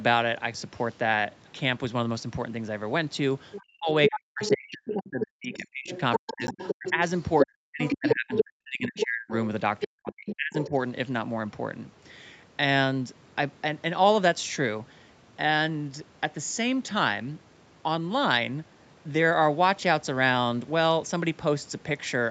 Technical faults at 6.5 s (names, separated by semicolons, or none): other side's voice leaking through; speech suppressed in double talk; block of digital silence